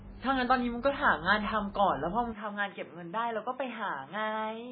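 From the start the speech carries heavy, likely MP3 compression damage: watery, swirling treble, nothing above 5 kHz, and smeared attacks, consistent with a very low bitrate around 16 kbps. At 2.33 s the input was likely switched to a poorer device. With no gap, the band narrows abruptly to 3.6 kHz, the level drops about 5 dB, and new background noise appears roughly 30 dB down. Unlike the steady codec swirl, this is a single sudden change in tone.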